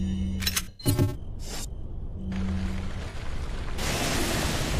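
From 0.62 to 0.87 s, and again at 3.10 to 3.15 s, AAC frame loss with concealment leaves smeared, noisy patches. The decoder rebuilt the missing audio from the last good spectrum, the longest run about a tenth of a second. Unlike a dropout, nothing falls silent.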